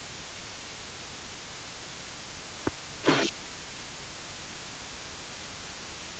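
From 0.0 to 3.07 s, 3.32 to 5.73 s and 5.89 to 6.17 s, the echo canceller likely failed to separate the near talker from loudspeaker echo during double talk and turned both down. The speech suppressed in double talk dips by up to about 15 dB (about 10 dB in the last span), losing presence in patches.

Throughout the clip there is also an echo leak, likely from a speakerphone whose canceller let part of the played-back call through. A delayed copy of the speech trails about 331 ms behind, roughly 10 dB below it.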